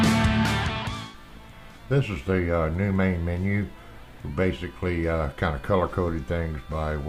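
No audible technical faults were found anywhere in the audio.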